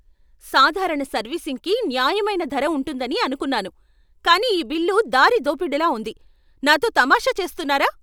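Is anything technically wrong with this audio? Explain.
No, nothing technically wrong can be heard in this speech recording. There is no sign of trouble in how it was captured, processed or delivered.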